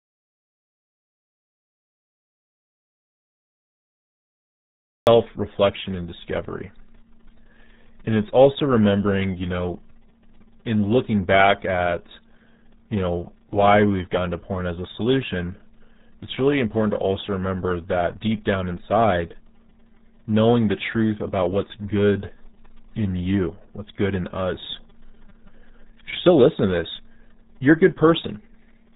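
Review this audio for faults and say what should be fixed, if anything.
An audio dropout to silence runs from the very start to 5.07 s. The clip opens in pure silence, with no room tone at all, and the speech enters abruptly on "reflection and discovery". A noise gate or fade would leave some floor or a tail, so this is likely a lost input feeding zeros to the recorder. Confirm the input connection and levels are live before recording starts.

Throughout, the speech carries the heavy damage of the RealAudio 14.4 codec, an 8 kbit/s dial-up speech coder. Nothing passes above 3.8 kHz, so it sounds muffled. Unlike a plain low-pass filter, it also adds a gargly texture from coarse frame-by-frame modelling. Re-export from the original source with a modern codec at an adequate bitrate.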